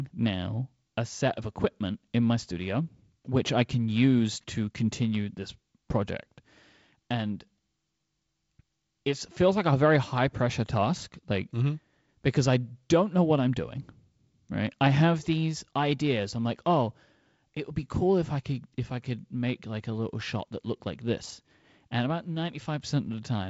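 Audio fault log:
No faults heard.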